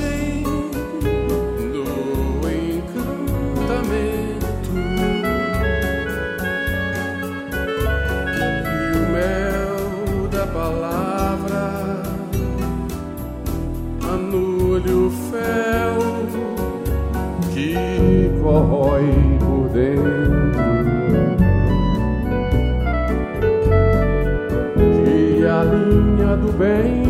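From 17.98 s until the end of the clip at about 27.1 s, de-emphasis has been applied wrongly. A treble-cut stage, designed to reverse a pre-emphasis boost, has acted on audio that never received that boost, or has been applied twice. The result is a smooth downward tilt across the upper spectrum, reaching about 11 dB of loss at 10 kHz relative to 1 kHz. Over that stretch the sound turns dull and muffled, with the top end noticeably rolled off.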